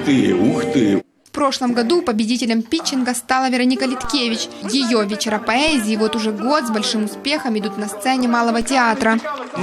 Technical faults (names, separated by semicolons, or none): DC step